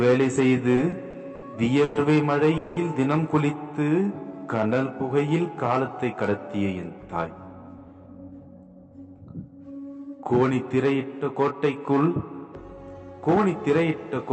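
From 0.75 to 1.44 s there are repeated stalls (stutter): the playout buffer ran dry four times, and each gap, the longest 70 ms, was bridged by continuing the last sound. About 150 ms is filled, roughly a fifth of that span. Unlike a single freeze, it is a string of short hitches, so the sound drags and stutters without losing anything.

Two call audio freezes follow, at 1.84 to 1.97 s (110 ms) and 2.57 to 2.78 s (190 ms). Each is one continuous held buzz or hiss that fades without reaching silence, and then the sound resumes exactly where it stopped. The likely cause is packets held up in transit, which emptied the jitter buffer and pushed playback later by the same amount each time.

Between 3.79 and 4.80 s a jitter buffer slow-down stretches the audio to 90% speed by repeating single pitch periods, adding 107 ms to build reserve. Pitch stays put, which separates it from a tape-style slowdown; sounds are simply drawn out.

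A jitter buffer speed-up runs from 6.71 to 8.92 s at 110% speed, trimming about 0.2 s of short pitch-period pieces to shed excess delay. A milder one at 13.10 to 13.78 s runs at 105% and removes a few tens of milliseconds. Pitch is unchanged and the audio simply sounds hurried, the opposite of the earlier stretch. Throughout, the call path's Opus coding limits the top end to 8 kHz.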